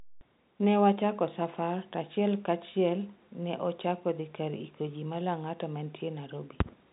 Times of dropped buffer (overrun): none

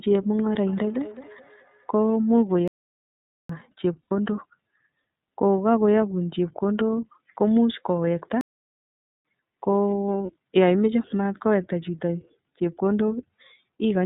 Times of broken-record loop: none

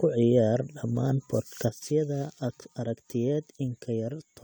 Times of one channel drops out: 1.69-4.44

